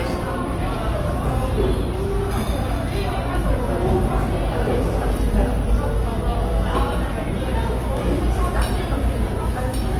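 A recording of sounds with Opus compression damage throughout, plainly audible. Tonal parts turn grainy, rough and noisy, though the full bandwidth survives. Gaps are filled rather than left as holes. This likely comes from Opus music mode at a low rate, which fits roughly 24 kbps.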